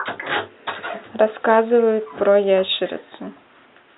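No technical faults in the speech, only the room's own background noise sitting about 37 dB below it.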